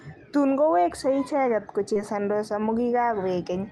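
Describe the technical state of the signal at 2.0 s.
Right around there, from 1.93 to 1.97 s, there's a short concealed packet loss: roughly 20 ms of the call arrived too late, so the decoder extended the preceding sound to bridge it, then blended back. You hear it as a quick smear through the Opus call path.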